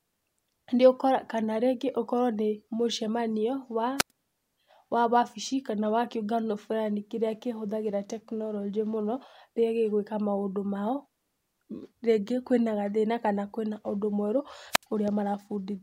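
Speech with two wireless microphone squelch dropouts, at 3.97–4.11 s (93 ms mute) and 14.71–14.85 s (71 ms mute). Rising hiss before each hole, unlike a clean digital packet-loss gap, marks a fading FM signal tripping the receiver's squelch.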